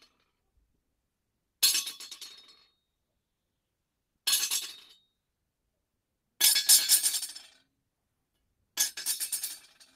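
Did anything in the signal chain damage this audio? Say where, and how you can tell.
No, nothing in the signal chain has damaged this audio, and the signal shows no sign of harm at any stage between capture and playback.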